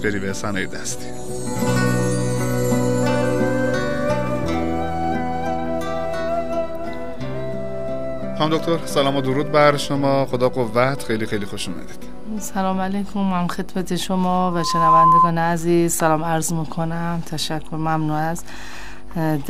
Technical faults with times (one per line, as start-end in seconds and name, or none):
14.35-15.33 loudspeaker feedback squeal